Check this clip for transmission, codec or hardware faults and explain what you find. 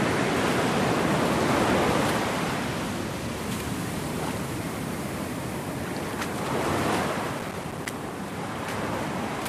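Processor overload crackle runs from 7.39 to 7.90 s. Throughout that half second the processing side repeatedly failed to deliver its small audio buffers on time. Each miss was filled with silence, leaving a short hole with abrupt edges. The spacing of the dropouts fits buffers of around 5 ms, with roughly twenty of them lost. Heard together, the holes form a gritty crackle that tears across the sound and stops cleanly once the load clears.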